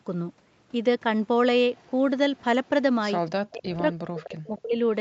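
From 1.75 to 1.9 s, then at 2.36, 2.64 and 3.25 s, faint echo leak appears. A delayed copy of the speech returns about 255 ms late, likely because a far-end echo canceller let it through. These scraps are short and very quiet, around 30 to 40 dB down.

From 3.48 to 4.79 s, the speech dips in pieces for about a second in total. At its deepest, the drop is around 40 dB. This is likely speech suppressed in double talk, with the canceller cutting the talker while the other side speaks. Inside this stretch, at 4.24 s, the echo leak returns louder, only about 20 dB down.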